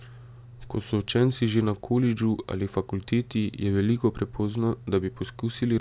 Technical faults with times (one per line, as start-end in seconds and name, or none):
none